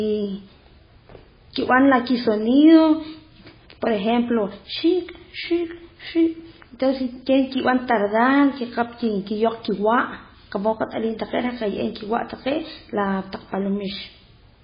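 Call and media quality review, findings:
Throughout: likely MP3 compression short of bits, which fits a 16 kbps stream. Treble cut at 5 kHz, weak lines flicker frame to frame. Speech dull, watery, swirly.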